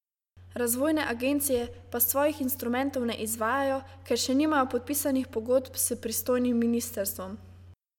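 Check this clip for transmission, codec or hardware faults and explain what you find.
No transmission, codec or hardware faults can be heard in the speech. Nothing in the recording points to a problem in how it was carried, encoded or captured.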